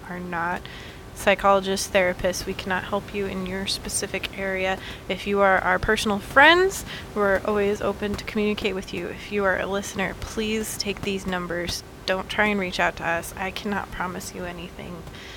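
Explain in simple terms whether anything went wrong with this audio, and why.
Nothing went wrong: the speech carries through intact, and the background noise is just the room noise the microphone picked up, sitting well below the speech.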